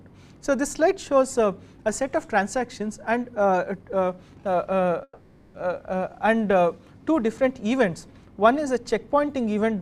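At 5.03 s the sound stalls: the last instant is stretched into a buzzing or hissing, fading tail lasting about half a second, with a brief dip to silence of roughly 40 ms, before the audio resumes at 5.56 s exactly where it left off. This is a call audio freeze, likely caused by packets held up in transit so the jitter buffer ran dry. Nothing is lost, but everything after it now arrives about 510 ms later.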